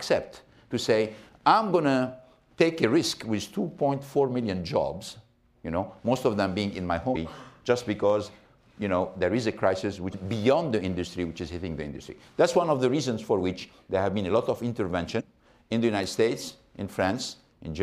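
At 7.12 to 7.16 s, 10.10 to 10.14 s and 15.17 to 15.21 s there are short bursts of damaged data in a compressed stream, each roughly 40 to 46 ms long. In each spot some of the coded bytes are wrong, so the decoder misreads the affected frames, loses its place in the bitstream and has to resynchronise on a later frame header. The result is a brief, harsh glitch that breaks into the sound before normal decoding resumes.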